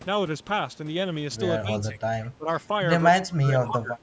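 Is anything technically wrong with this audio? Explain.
Yes. The speech dips at 1.61–2.03 s and 2.28–2.49 s (about 15 dB) and from 3.11 to 4.0 s (about 30 dB). The likely cause is speech suppressed in double talk, where an echo canceller mistakes overlapping talk for echo. On a spectrogram and waveform, the energy thins in those stretches.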